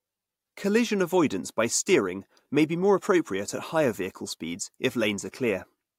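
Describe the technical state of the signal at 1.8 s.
At 1.8 s the speech signal is intact, with no audible technical fault at that moment.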